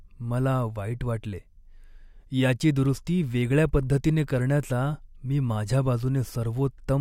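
No technical faults can be heard in this recording.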